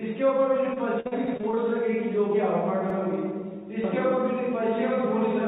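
From 0.74 to 1.59 s, repeated packet loss (robotic sound) breaks up the audio. Seven short holes, the longest about 51 ms, are bridged by stretching the preceding sound, so about a quarter of that stretch is synthetic fill. It sounds choppy, with pieces missing, rather than exactly repeated.

Inside that stretch, at 1.28 to 1.37 s, and again at 2.90 to 2.99 s, a repeated buffer plays the same 85 ms chunk twice, which fits a 4096-sample buffer. Unlike the smeared concealment, the copy is exact and joins abruptly, giving a clean stutter with nothing lost. All of this sits on the call path's narrow band, which stops at 4 kHz.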